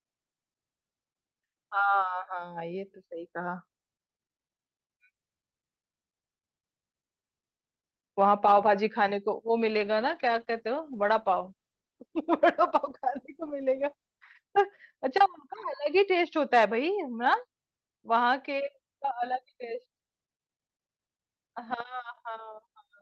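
From 9.59 to 14.51 s, a call bitrate drop turns the speech rough and muffled, fitting a fall from 40 to 13 kbps. Unlike packet loss, nothing drops out.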